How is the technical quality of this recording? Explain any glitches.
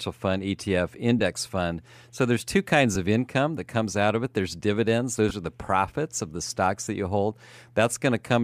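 Four tiny dropouts in this speech come from lost LE Audio frames: at 1.19 s, at 2.94 s between "there's two kinds" and "of income that comes", at 5.29–5.31 s just before "are the profits of", and at 6.85–6.87 s between "profits of the stocks" and "that you hold". Each gap is about 7.5 to 15 ms, which fits one or two 7.5 ms frames going missing. The decoder covers each gap by replaying the last spectrum with scrambled phase, so you hear a quick grainy smear rather than true silence. Underneath it all there's a light, slightly breathy coding texture, likely from LC3 at a modest bitrate.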